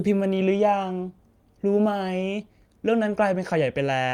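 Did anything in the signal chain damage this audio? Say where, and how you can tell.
No, nothing in the signal chain has audibly damaged this speech recording; its level, continuity and timing hold steady throughout, with nothing pointing to trouble at any stage between capture and playback.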